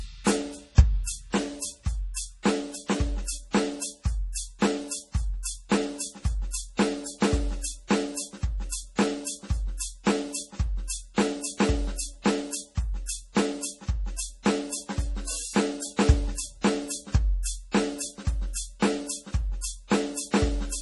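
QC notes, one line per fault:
Throughout, MP3 compression: the music has a hard ceiling with nothing above 11.5 kHz, and the damage is heavy. There's a watery, swirly quality as quieter detail flickers in and out, metallic chirps on the bright top-end content, and attacks that smear instead of landing cleanly. That's likely an MP3 encode starved of bits, cutting the treble and zeroing weak frequency lines frame by frame, which fits a very low rate around 32 kbps.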